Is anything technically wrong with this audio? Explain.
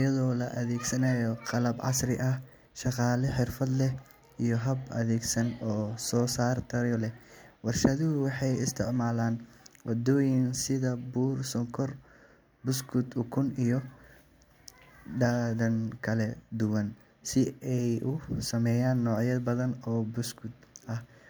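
No, nothing technically wrong can be heard here.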